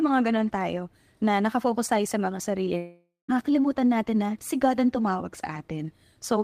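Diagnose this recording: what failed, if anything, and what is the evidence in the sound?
Right after "sa mga" at 2.77 s the speech smears into a buzzy tail that fades to near-silence, then picks up at 3.30 s with about half a second missing. That's likely a long network dropout, with the receiver's concealment stretching the last sound until it gave up.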